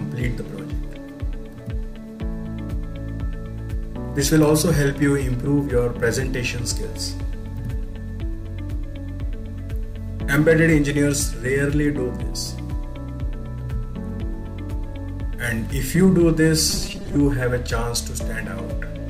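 From 16.70 to 17.16 s the sound turns to a rigid, metallic buzz at 200 Hz: robotic sound from repeated short buffers, likely from a 5 ms block being replayed whenever fresh audio ran late, with about half the signal repeated. The waveform shows identical 5 ms cycles, and the spectrogram shows evenly spaced harmonics of 200 Hz.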